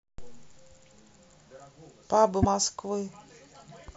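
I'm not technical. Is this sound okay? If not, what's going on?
No. At 2.39 to 2.45 s the speech is briefly broken by damaged data in a compressed stream.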